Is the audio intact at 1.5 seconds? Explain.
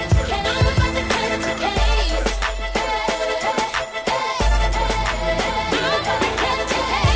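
No. The resampler restarted on every block throughout, 1.5 s included. Each 10 ms block was converted alone, likely from 48 kHz down to 16 kHz. Its edges saw false neighbouring samples. The small errors form a 100 Hz buzz beneath the sound.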